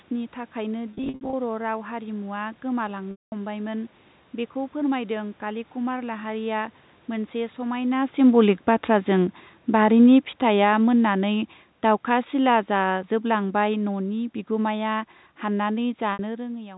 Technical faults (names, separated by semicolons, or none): packet loss with pitch repetition; automatic gain falling